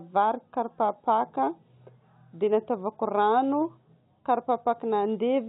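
Nothing goes wrong anywhere in this speech, which comes over a call path whose narrowband sound, with nothing above 4 kHz, fits an ordinary G.711 telephone codec.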